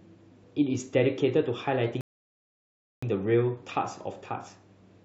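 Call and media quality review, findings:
Rebuffering stall, 2.01–3.03 s. Speech drops to silence, resumes exactly where it stopped. No content lost; about 1.02 s added. Player/jitter buffer underrun: downloaded audio exhausted, playback paused until more data arrived. Check network throughput and buffer depth.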